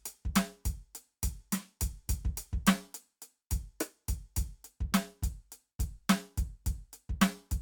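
A DC step occurs at 5.84 s in the music: the waveform's zero line suddenly jumps to a new offset, producing a brief low thump. The offset then drains away gradually, which fits a high-pass around 5 Hz, while the music continues unchanged.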